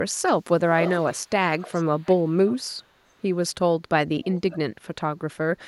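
A far-end echo canceller likely let loudspeaker pickup through, so this speech carries an echo leak: a copy delayed 463 ms at 0.76–1.3, 1.59–2.56 and 4.25–4.58 s, faintest in the middle stretch.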